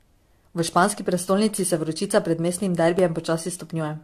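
Speech that has most likely been through repeated lossy encoding, around five passes of AAC-LC at something like 64 kbit/s, shows generation loss throughout. Each re-encode quantises the signal again on a shifted frame grid, so the noise and spectral gaps from every pass stack up. The result sounds swirly and hollow, consonant attacks are smeared, and nothing remains above roughly 13.9 kHz.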